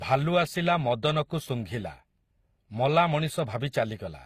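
Speech, with transcoding between lossy codecs throughout. Nothing reaches above 15 kHz, and two different kinds of compression artefact sound together. This likely fits Opus at around 48 kbit/s re-encoded as HE-AAC at around 24 kbit/s.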